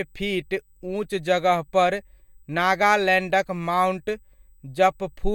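From start to finish, a faint USB whine sits beneath the speech: a steady tone at 8 kHz, strongest at its 16 kHz harmonic, roughly 45 dB down, from the bus's 125-microsecond microframe current leaking in through the power or ground. A spectrogram shows thin, unbroken horizontal lines at both frequencies.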